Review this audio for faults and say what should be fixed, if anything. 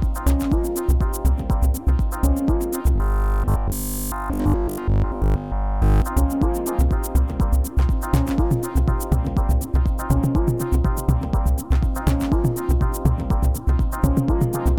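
From 2.96 to 6.02 s there's robotic sound from repeated short buffers: the audio collapses into a rigid, metallic buzz pitched at 50 Hz that only loosely tracks the underlying sound. The likely cause is new audio arriving too rarely, so playback keeps looping the most recent 20 ms chunk, and repeating it 50 times a second stamps that buzz on top. Through that stretch essentially everything heard is repeats, with the real audio skipped. To prevent it, give the capture or network path enough buffering and scheduling headroom that fresh audio always arrives before the player runs dry.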